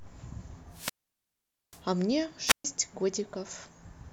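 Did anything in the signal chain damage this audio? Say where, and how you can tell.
Yes, at the wireless microphone's radio link, before conversion: wireless microphone squelch dropout. From 0.69 to 1.84 s hiss rises, then the speech falls into about 0.83 s of near silence before returning. A shorter repeat runs from 2.46 to 2.65 s, with a mute of about 0.13 s. The FM signal faded until the receiver's squelch shut the output. The static swell before each hole separates this from network packet loss, which gaps abruptly without that noise.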